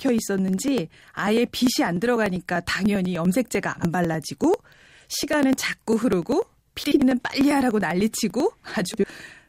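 Speech runs through periodic USB or driver dropouts from 0.09 to 9.39 s: about a millisecond skipped every 0.099 s, giving steady ticks heard only under signal, unlike random clicks. Frames out of order at 3.75–3.88 s, 6.83–7.02 s and 8.91–9.08 s swap adjacent 40, 80 and 60 ms blocks, causing garbled flutter but no lost time.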